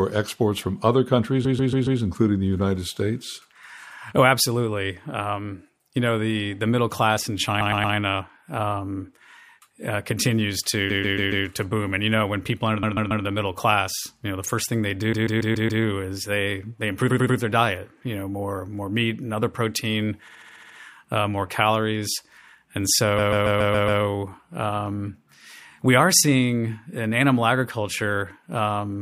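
The speech stutters, looping short chunks, at 1.44–2.00, 7.60–7.94, 10.89–11.45, 12.82–13.24, 15.12–15.82, 17.09–17.37, 20.27–20.76 and 23.18–24.01 s. These are repeated frames: blocks of 70–140 ms were replayed three to seven times, lengthening the audio.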